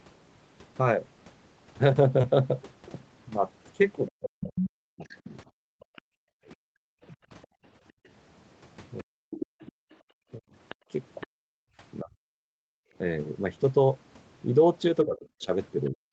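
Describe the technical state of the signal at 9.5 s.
At 9.5 s the talker's speech is in speech suppressed in double talk, which runs from 4.09 to 12.36 s. The level dips in pieces, some drops reaching about 40 dB, for roughly three seconds in total. The likely cause is an echo canceller turning everything down during overlap. Unlike a network dropout, the sound ducks in pieces.

The same moment falls within the other side's voice leaking through, from 8.99 to 11.27 s. A second, fainter voice sits about 10 dB under the talker, which likely comes from loudspeaker echo left uncancelled. That competing voice is what separates it from simple suppression, where nothing is added.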